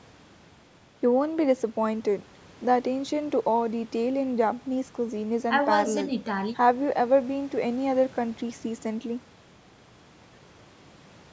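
A speech recording with no technical faults to report. It has passed through a call's microphone processing, which limits the audio to nothing above 8 kHz and trims the lowest bass with its high-pass filter, as that path normally does.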